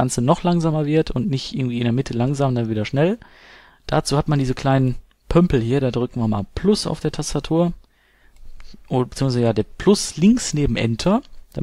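Nothing technically wrong can be heard anywhere in the audio; the signal stays continuous and stable throughout.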